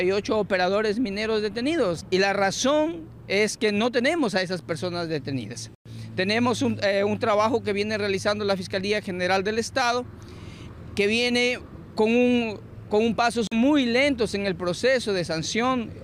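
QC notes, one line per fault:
5.75–5.87 s and 13.47–13.57 s: Bluetooth stall. The audio drops to silence for about 110 ms, then about 44 ms, and resumes where it left off, likely because interference delayed wireless packets until the headphone buffer emptied and playback waited for the retransmissions.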